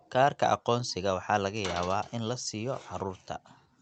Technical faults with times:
none

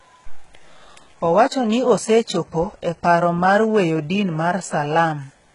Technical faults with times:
0.00-5.54 HE-AAC compression

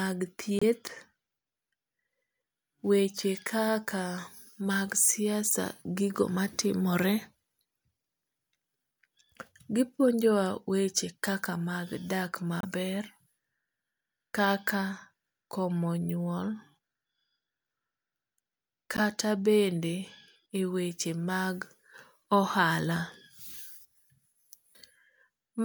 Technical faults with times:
0.59-0.63 corrupt frame decoded
12.61-12.65 corrupt frame decoded
18.97-19.00 corrupt frame decoded

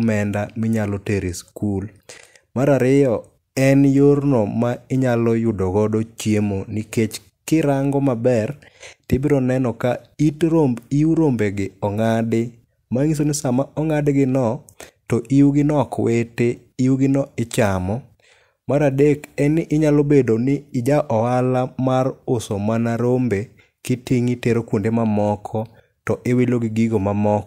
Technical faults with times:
none

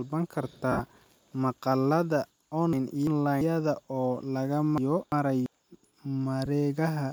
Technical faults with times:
0.72-0.80 lost LE Audio frames
2.73-3.41 chunks out of order
4.78-5.46 chunks out of order
6.45 lost LE Audio frames

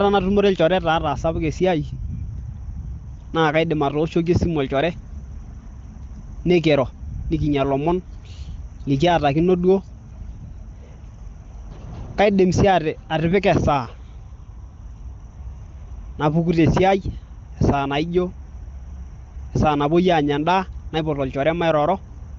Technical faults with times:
none

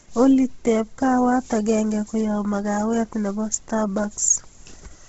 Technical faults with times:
0.00-5.09 Bluetooth LC3 compression

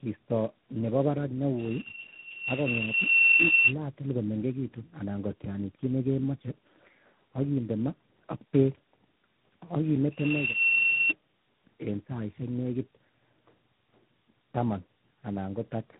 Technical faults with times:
0.00-15.99 tandem speech coding

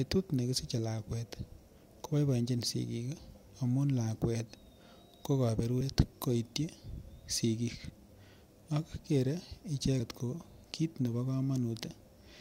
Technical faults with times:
3.18 compressed frames skipped
5.81 compressed frames skipped

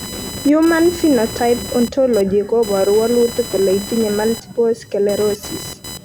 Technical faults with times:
0.00-6.04 computer activity noise

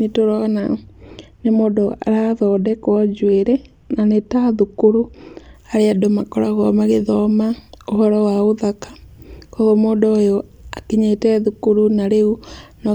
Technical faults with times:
0.60-5.54 de-emphasis applied wrongly

